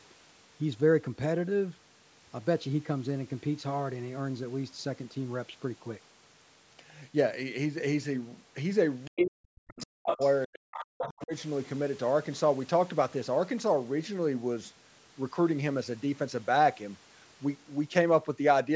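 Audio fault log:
9.05 to 11.23 s, other side's voice leaking through: brief scraps of a second voice at 9.05, 9.7, 10.07, 10.74 and 11.03 s, from about 5 dB to about 20 dB below the talker, likely loudspeaker echo the canceller missed. Unlike suppression, something is added rather than taken away.
9.08 to 10.2 s and 10.46 to 11.33 s, speech suppressed in double talk: the talker's level drops, by as much as about 40 dB, for roughly a second in each stretch. The likely cause is the echo canceller muting both voices while they overlap, so speech is lost rather than an extra voice appearing.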